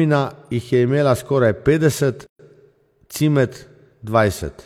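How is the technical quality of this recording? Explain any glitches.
The speech is interrupted once by a gap at a join of encoded pieces. From 2.27 to 2.39 s, about 130 ms of silence cuts in. Separately encoded segments were spliced with their encoder start delay and final-frame padding left untrimmed. The speech stops dead and then resumes where it left off. A waveform shows a flat stretch with slightly softened edges, and a spectrogram shows a clean vertical blank band.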